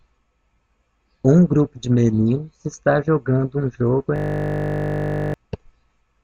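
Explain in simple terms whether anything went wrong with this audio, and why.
A system hang loop runs from 4.16 to 5.34 s, after "está jogando um jogo". The computer froze and kept replaying one 20 ms scrap, making a steady 50 Hz buzz.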